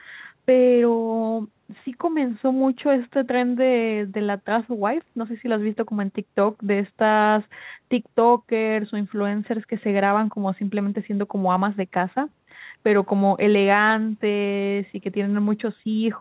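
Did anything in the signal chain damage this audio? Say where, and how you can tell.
No, nothing in the signal chain damaged this speech.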